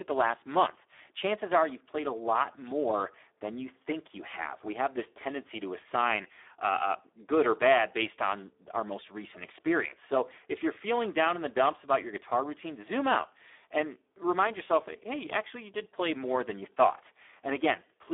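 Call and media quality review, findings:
Speex codec, whole clip: speech hoarse, noisy; band limited to 300 Hz–3.6 kHz, nothing above 3.8 kHz. CELP starved of excitation bits, consistent with roughly 8 kbps. Spectrogram: blank above 3.8 kHz, harmonics smeared into noise.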